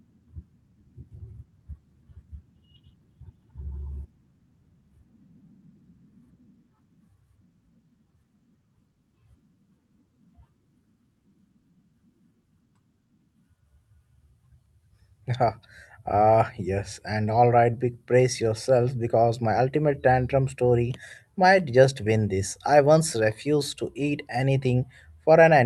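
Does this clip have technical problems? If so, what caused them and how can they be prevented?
No, the speech carries no technical faults; the top end stops near 12 kHz with the usual coding noise, which is ordinary for a WebRTC call path and fits Opus at about 64 kbps.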